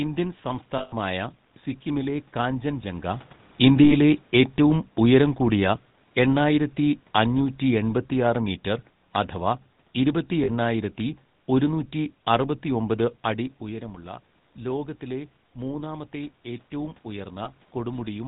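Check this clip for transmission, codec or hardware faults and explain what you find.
The speech shows codec damage throughout, four brief dropouts, and one slow level drop.

GSM full-rate codec, whole clip: the voice sounds buzzy and gravelly, with nothing above 4 kHz. This matches GSM full rate at 13 kbps, which models the vocal tract and drives it with sparse pulses.

Lost GSM frames, at 0.78–0.94 s (140 ms), 3.84–3.93 s (60 ms), 10.44–10.49 s (40 ms) and 17.44–17.47 s (20 ms): a rough, metallic ring holds the sound. The decoder is repeating the last good frame.

Automatic gain falling, from 3.6 to 8.45 s: the voice and its background sink together by about 6 dB. The gain control judged the input too loud, or its background noise too strong, and lowered it gradually. The room noise sinks with it. The level shifts near 3 s and 13 s come from the talker moving, not from this control.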